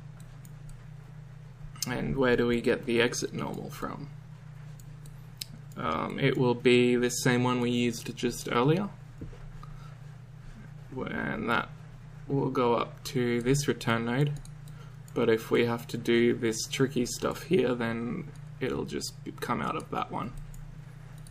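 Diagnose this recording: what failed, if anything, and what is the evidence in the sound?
No fault can be heard.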